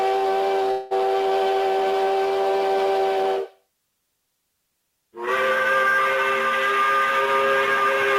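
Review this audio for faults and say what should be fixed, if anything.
A call audio freeze runs from 0.71 to 0.93 s: the sound stalls into a fading buzz for about 0.19 s, then resumes exactly where it stopped, likely because packets arrived late and the jitter buffer ran empty. Unlike a dropout, nothing is lost; everything after is shifted roughly 0.19 s later. A deeper adaptive jitter buffer, or prioritising the call traffic on the network, would prevent it.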